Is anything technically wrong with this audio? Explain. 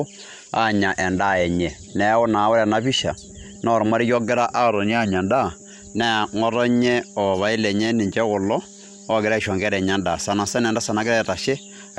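Yes. Throughout the speech there is plainly audible MP2 compression damage, likely from encoding at a low rate, which fits a bitrate near 80 kbps. Starved of bits, the encoder switches off upper sub-bands and coarsely quantises the rest, so the sound is dull with a gurgling, granular edge. On a spectrogram nothing appears above 15.9 kHz, and the upper region shows blocky patches flickering on and off between frames.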